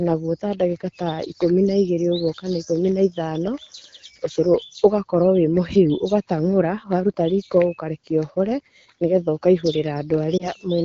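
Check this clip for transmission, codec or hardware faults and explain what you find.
One transmission fault is audible, near the end of the speech. The clip has the wideband, HD Voice character of AMR-WB, with the light coding texture of a mid rate.

From 10.38 to 10.49 s there are lost AMR speech frames. A frame failed its checksum after a radio error, and the decoder covered the gap by reusing the last good pitch and vocal tract settings at reduced gain. The result is a brief dip or warble, which fits a single lost 20 ms frame.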